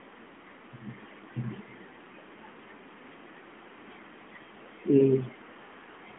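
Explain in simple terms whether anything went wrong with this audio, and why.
Nothing went wrong: the speech comes through an ordinary AMR narrowband mobile phone line, which passes only about 200 Hz to 3.5 kHz, so its narrow, phone-call sound is simply how such a line works.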